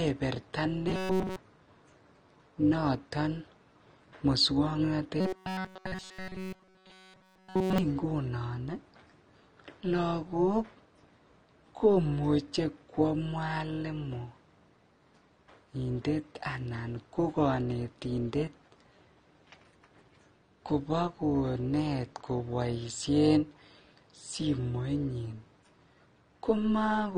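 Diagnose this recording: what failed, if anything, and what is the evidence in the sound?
Overlap-add ripple runs through the whole thing, probably somewhere in call processing where frames get windowed and rejoined. The level pumps by about 6 dB at roughly 200 Hz, once per frame, so the speech carries a metallic buzz with extra tones around it because the overlapping windows don't sum flat.

There's a codec stage too, likely AAC compression. The damage is plainly audible: dull, smeared speech with warbly, fizzy sibilants. That fits AAC-LC squeezed to a low rate, around 32 kbps, quantising away detail and dropping the top band.

At 0.88 to 1.37 s and again at 5.20 to 7.78 s the voice collapses into a stiff metallic buzz at 188 Hz that still follows the speech contour. That's the driver or buffer stage, likely starved and looping a buffer of about 5.3 ms in place of essentially all of the real audio. 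That's robotic sound from repeated short buffers.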